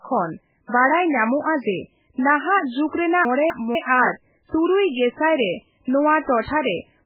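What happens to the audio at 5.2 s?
At 5.2 s the speech sounds watery and swirling, with dull treble and nothing above 5 kHz, as it does throughout the clip. The likely cause is heavy MP3 compression, which fits a very low bitrate around 8 kbps: the encoder cuts the treble and drops weak frequency components from frame to frame.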